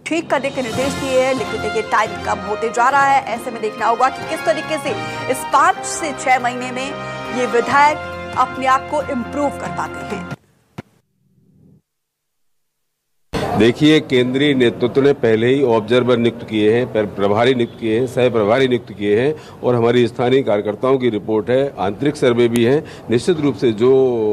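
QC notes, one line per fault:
22.56 s, file header played as audio. A single sharp, loud click snaps out of the sound at this point. It comes from a new piece of audio starting with its WAV header still attached. The player treats those header bytes as sample values. They hold file information, not a waveform, so they land as a brief burst of large, unrelated values. That burst does not follow the surrounding signal at all. The result is an abrupt, hard-edged snap.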